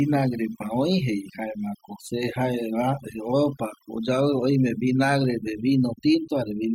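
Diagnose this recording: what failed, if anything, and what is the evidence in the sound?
Overdone noise removal runs through the whole recording. The spectral noise reducer is set too aggressively: any frequency band sitting near its noise estimate is pulled far down or switched off. In the gaps between phrases the background collapses to near silence with scattered twinkling specks, and the quieter components of the speech fall under the same threshold and are removed along with the noise.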